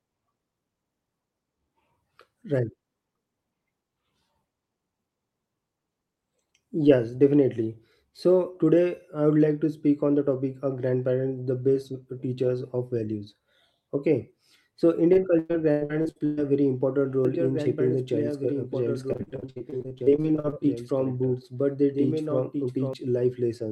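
From 15.13 to 16.39 s, just before "very important", repeated packet loss makes the speech choppy and robotic. Holes up to 121 ms are patched by repeating earlier sound, showing as smeared, stuttering blocks on a spectrogram. After "very important", from 17.25 to 22.93 s, a doubled audio track runs, likely from a second, slower capture path. A full-band copy about 5 dB quieter trails by roughly two seconds, starting and stopping abruptly, with no decay. Within it, from 19.13 to 20.58 s, the loss returns, with shorter gaps up to 59 ms.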